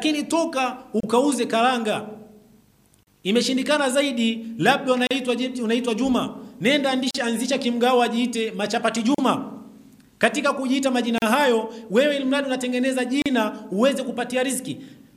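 Roughly every 2 s the sound drops into a short silence at 1.00, 3.03, 5.07, 7.11, 9.15, 11.18 and 13.22 s: a gap at a join of encoded pieces. The first lasts about 30 ms, the rest about 38 ms. Each chunk was encoded separately and spliced without trimming the encoder's start delay or end padding, so you get a little dropout with smeared edges before the audio resumes right where it stopped.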